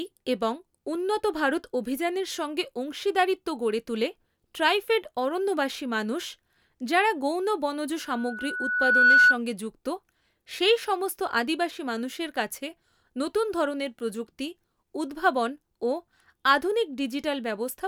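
Just after "যাঁরা গৌণ বনজ", at 8.05 s, loudspeaker feedback squeal starts. The microphone picks up its own loudspeaker, and the loop gain exceeds one at 1.5 kHz. A single tone swells for about a second, ending at 9.38 s, roughly 10 dB above the speech.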